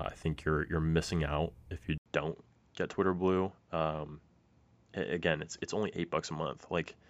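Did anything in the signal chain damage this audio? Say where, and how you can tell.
Yes. At 1.98 s the audio drops out for 80 ms. When the speech returns, it runs to the end with nothing above 7.6 kHz. It sounds duller and boxier, with new background noise about 45 dB below the speech. The level stays about the same. This points to the capture stage: the input was likely switched to a poorer device. That device has a narrower band and its own noise, and the switch itself left the short gap.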